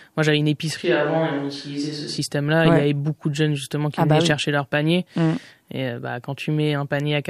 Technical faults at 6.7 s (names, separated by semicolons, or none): none